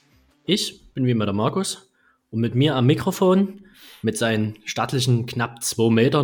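Listening through the clip, nothing stood out as a technical problem at any point.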